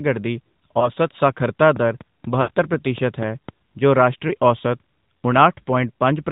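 The speech has passed through the AMR narrowband mobile codec, whose pulse-driven vocal tract model discards everything above 4 kHz. Throughout, the speech sounds muffled and plainly buzzy and synthetic, a degree of damage that fits a mid-range rate of about 10.2 kbps.

At 0.80 to 0.91 s there are lost AMR speech frames. A corrupted frame forced the decoder to repeat its last pitch and vocal tract settings at falling gain, causing a brief dip and warble that fits a single 20 ms frame.

From 1.76 to 3.50 s there is a train of clicks, about seven sharp ticks at a steady pace of roughly four per second. They peak about 5 dB above the speech and sit on top of it, including in gaps. The likely cause is interference from nearby equipment or a faulty connection.

Inside that click train, at 2.42 to 2.57 s, a longer run of lost frames draws the sound out and lets it sag toward silence. The length fits about 60 ms of missing frames. 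The speech then returns briefly weak and rough.

At 4.28 to 4.33 s, another single lost frame produces a short, warbling dip as the decoder again extrapolates from stale parameters.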